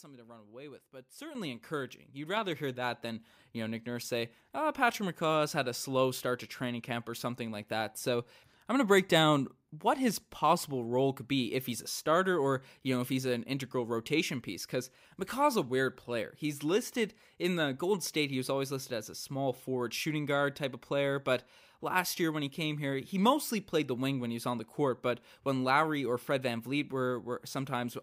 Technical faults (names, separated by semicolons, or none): microphone volume stepped up